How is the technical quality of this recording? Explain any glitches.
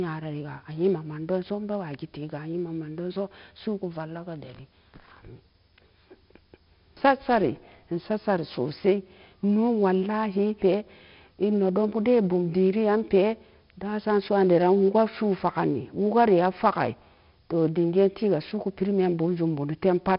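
The technical quality is poor, because one coding fault runs through the whole speech recording. 4-bit ADPCM compression is present throughout: each sample is stored as a coarse 4-bit step from a predicted value, and that quantisation error rides on the speech as a gritty hiss that swells on louder syllables and roughens sharp onsets. The damage is heavy, nothing reaches above about 5.3 kHz, which dulls the sound, and the rate fits roughly 44 kbps.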